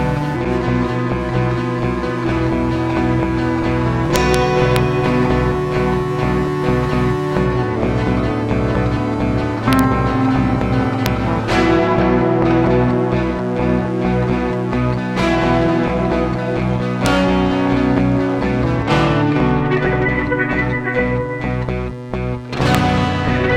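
Integer overflow cracks the loud peaks at 4.16–4.34 s, 4.76 s, 9.73–9.79 s, 11.06, 17.06 and 22.75 s. Pushed at most about 1 dB past full scale, samples wrap to the opposite extreme instead of flattening, so each is a violent snap, far harsher than clipping's buzz.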